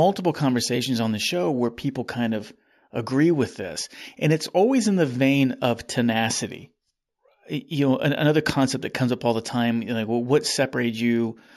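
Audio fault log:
Throughout, imaging from linear upsampling: the speech sounds dulled at the top, with a faint metallic shimmer on sibilants. Straight-line interpolation left mirror images between 8 kHz and 16 kHz, roughly 25 dB below the speech, which fits a 16 kHz source raised to 48 kHz.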